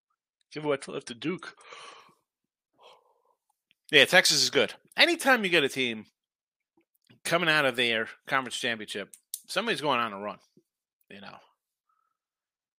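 From the start to 2.0 s, this is an adaptive stream starting at a low bitrate: the player began on a cheap rendition, which fits about 40 kbit/s MP3, before stepping up near 128 kbit/s. Until then nothing sounds above 10.6 kHz and codec smearing is heavier, then clarity jumps with no gap.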